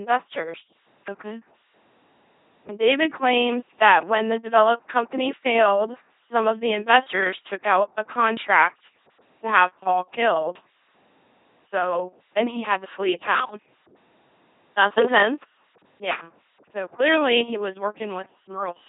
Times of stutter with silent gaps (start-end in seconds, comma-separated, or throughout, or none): none